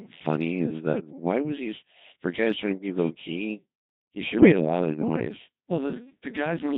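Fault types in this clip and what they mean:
Codec 2 vocoder: The whole clip runs through a very low-rate vocoder at 2.4 kbit/s that sends only pitch, voicing, level and a rough spectral shape. The decoder rebuilds the speech from sine waves, so it sounds heavily robotic and buzzy throughout.
Bit errors on digital voice radio: From about 4.38 to 4.52 s, just before "a lot of noise", the speech breaks into a warbly, bleepy burst, which fits around four frames being hit. Corrupted bits at an error rate of roughly 15 percent scramble their pitch, level and tone colour.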